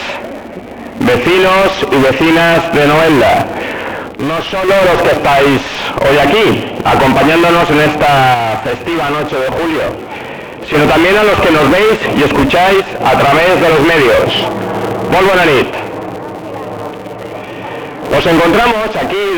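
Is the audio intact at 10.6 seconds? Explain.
No. From 8.34 to 10.74 s one channel drops out. The level falls abruptly by about 6 dB and recovers just as suddenly, which fits one stereo side likely going missing before the mono sum. Its square-edged step sets it apart from a gradual fade or gain ride.

Throughout the clip, including this moment, the filter restarts on every block. Each block starts from zero state and adds a small transient, producing a 200 Hz buzz. Unlike steady mains hum, this buzz rises and falls with the level of the sound.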